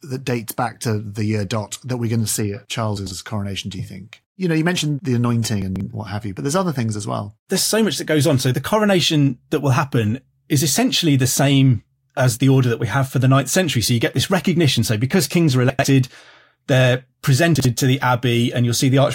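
At 2.97 s, chunks out of order jumble a short stretch of speech. A block of about 46 ms plays two slots late. The same happens at 5.62 s, after "know you mentioned the", three slots late. At 15.70 s, after "because kings are", it is two slots late. At 17.55 s, before "to the", it is one slot late. Each time the sound stutters and scrambles briefly.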